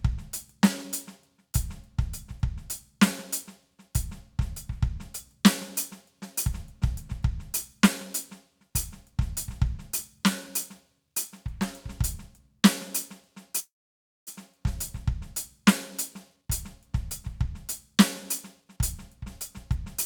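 A call audio freeze runs from 13.59 to 14.29 s, likely from packets stalling in transit until the jitter buffer emptied. The last sound is stretched briefly, then about 580 ms of silence follows. The music resumes where it stopped, with nothing lost, but now sits about 0.67 s later.

A jitter buffer speed-up follows at 16.36 to 16.49 s, where playback briefly doubles in speed, and again at 18.61 to 19.18 s at about 115%. Each time roughly a tenth of a second is trimmed in small slices to reduce the built-up delay, so the music rushes at unchanged pitch and the tempo lurches.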